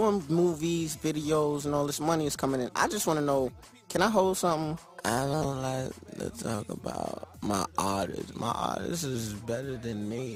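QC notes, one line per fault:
5.43–5.45 s, chunks out of order: a 10 ms slice of audio turns up one chunk late and plays after the piece meant to follow it, so nothing's missing but the swap leaves hard joins, giving a quick jumbled blip.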